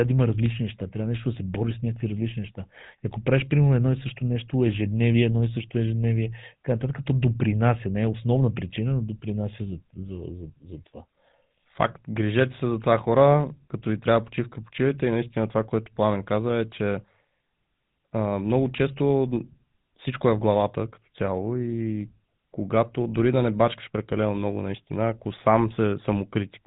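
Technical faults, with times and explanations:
Throughout: GSM full-rate codec. The speech has plainly audible damage, with a buzzy, gravelly roughness over the whole thing and no content above 4 kHz, so it sounds narrow and phone-like. That's how the old full-rate coder works. It models the vocal tract, then drives that model with a regular pulse train that keeps only one in three excitation samples. The roughness comes from that coarse pulse excitation, and the dull top end comes from the 4 kHz ceiling. The bit rate it implies is around 13 kbps.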